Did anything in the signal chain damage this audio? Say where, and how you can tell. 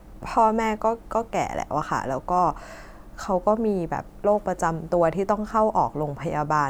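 No, nothing in the signal chain can be heard damaging this speech recording, which reaches the listener in the same intact state at every stage.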